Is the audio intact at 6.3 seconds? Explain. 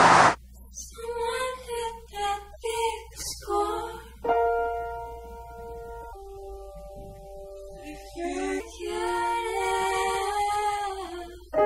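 No. From 6.13 to 8.60 s the sound drops about three semitones and drags, playing at 0.843 times its proper speed. This is a section at the wrong speed, likely from being played against the wrong clock, so pitch and tempo sink together.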